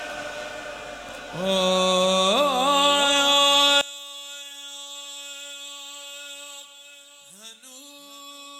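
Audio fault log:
3.81–8.59 s one channel inverted: level drops about 22 dB as shared content cancels in mono, likely reversed polarity; waveform abruptly shrinks, spectrogram darkens.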